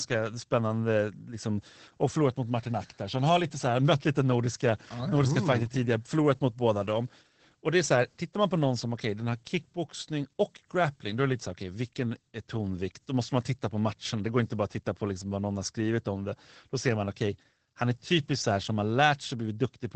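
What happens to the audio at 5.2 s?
At 5.2 s you're hearing Opus voice compression, which runs through the whole clip. The SILK linear-prediction coder, which fits around 12 kbps, codes the excitation coarsely and leaves nothing above 8.6 kHz, so the speech sounds plainly muffled, hoarse and a bit robotic.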